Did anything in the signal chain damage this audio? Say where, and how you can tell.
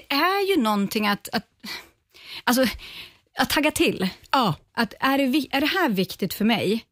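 No, nothing in the signal chain audibly damaged this speech recording. I can't point to any stage, from the wiring to playback, that has left a mark on the sound.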